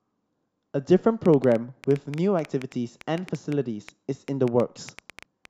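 Something in the chain, likely interference from nearby equipment or a faulty connection or power supply, is injecting repeated pulses into this speech clip, producing a train of clicks from 1.26 s to 5.46 s. Around thirty similar clicks arrive irregularly at roughly 6.7 per second, peaking around 5 dB above the speech and ticking through the pauses too.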